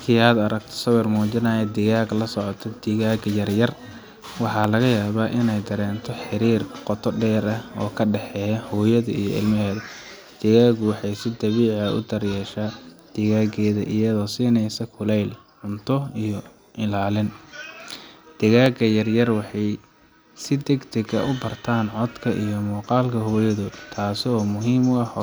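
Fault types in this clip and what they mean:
Dropped samples: a tiny run of samples, well under a millisecond's worth, is likely lost from the stream, so the waveform leaps straight from one value to a later one with nothing in between. That sudden step is far too brief to remove any of the speech, but it is heard as a single sharp click, and it happens six times, at 4.64, 11.04, 13.91, 17.36, 18.66 and 21.52 s, each a thin vertical line across the spectrum.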